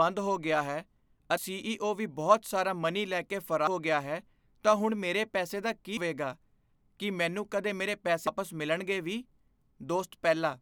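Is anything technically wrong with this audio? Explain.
Yes. There is audio missing between chunks at 1.37, 3.67, 5.97 and 8.27 s. The recording was likely handled in 2.5-second chunks, with roughly a fifth of a second lost at each handover and the two sides butted together without a gap. The speech therefore skips abruptly forward at each point, at regular intervals.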